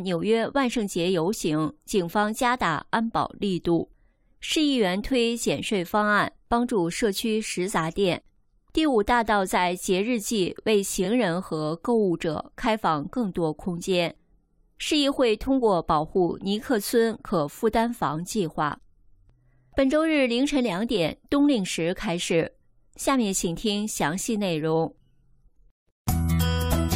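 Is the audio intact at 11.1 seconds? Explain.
No. From 11.04 to 11.07 s there is a tiny stutter, a fraction of sound heard twice. This is repeated frames: one 23.2 ms block, which fits a single compressed frame, was played again, lengthening the audio by 23.2 ms.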